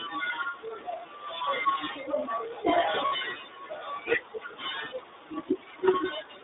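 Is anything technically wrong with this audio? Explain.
Yes. Throughout, the speech has passed through the iLBC codec, which codes each frame's excitation independently, and the damage is plainly audible. The line is confined to roughly 300 Hz to 3.7 kHz, and the voice has a rough, synthetic edge consistent with the 13.33 kbps, 30 ms-frame mode.

From 3.06 to 3.12 s there is a gap from lost iLBC frames. The decoder filled about 60 ms, which fits two missing 30 ms frames, by repeating the last pitch cycle blended with noise. It sounds like a briefly held, buzzy vowel, and the voice recovers almost immediately afterwards.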